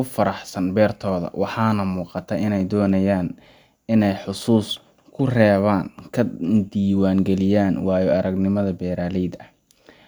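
No technical faults can be heard at any point in this speech recording, and the signal holds steady throughout.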